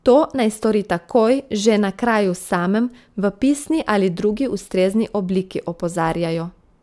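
No technical faults are audible.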